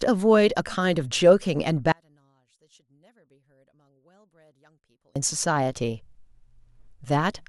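One channel inverted, from 1.92 to 5.16 s: the speech nearly disappears, dropping by about 38 dB. This is most likely one stereo channel with its polarity flipped. When the two channels are summed to mono, the centred voice content present equally in both cancels almost completely. What survives is the small difference between them, a faint trace of speech, until the level returns at 5.16 s.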